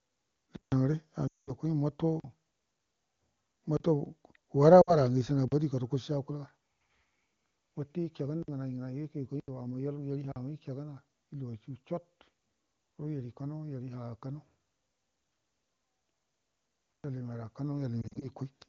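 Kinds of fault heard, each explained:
Block of digital silence: stretches of samples drop to silence and return with no fade. This points to output buffers not being filled in time. The longest holes, 160 ms at 0.56 s and 120 ms at 16.92 s, are heard as clear gaps. The shorter ones, between 31 and 80 ms at 2.2, 3.77, 5.48 (just before "bodi gadəko"), 8.43, 9.4 and 10.32 s, are heard as short holes.
Lost AMR speech frames: when frames are corrupted in transit, the AMR-WB decoder (running at 23.85 kbit/s, where speech is otherwise clean) fills the gap by repeating the last good pitch and vocal tract settings at falling gain. At 1.27 s a run of about 200 ms drops the sound to near silence before it returns thin. At 4.82 s, about 60 ms gives a short dip. From 18.02 to 18.29 s, scattered losses of at most 40 ms make the sound warble.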